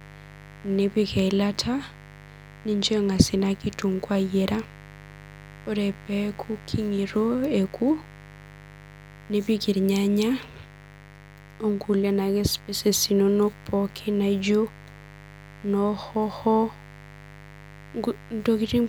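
From start to finish, a mains buzz sits under the speech, roughly 20 dB below it. Its fundamental is 50 Hz, so it comes from a 50 Hz supply. Sharp switching spikes, of the kind a dimmer, rectifier or unshielded cable lets in twice per cycle, spread energy into harmonics well into the kilohertz range. That gives a raspy, edgy tone rather than the smooth, low drone of plain hum, and it stays audible even where the speech leaves the low frequencies clear.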